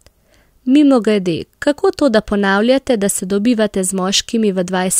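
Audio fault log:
No faults detected in the speech.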